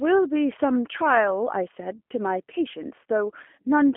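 From start to finish the speech carries G.729 codec damage, plainly audible. The codec models each short frame as a vocal tract filter driven by a pitch predictor and a handful of pulses, so the speech comes back rebuilt rather than preserved. It sounds slightly rough and synthetic, which fits an 8 kbit/s G.729A stream. The line band runs from 250 Hz to 3.4 kHz, leaving the speech thin and muffled with no low body.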